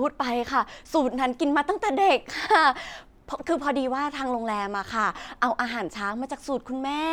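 No technical faults can be heard anywhere in this speech recording. Nothing in the audio marks a moment that needs a time or a description.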